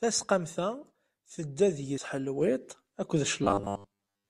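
At 1.98 s there's a CD skip: the laser jumped to another turn of the spiral, so the speech gives a tiny tick with a very brief mute and lurches to a different point. From 3.44 s to the end, the speech turns into a rigid, metallic robotic buzz pitched at 100 Hz that still loosely follows the speech, likely from repeated short buffers: roughly 10 ms chunks replayed over and over while most of the real audio gets skipped.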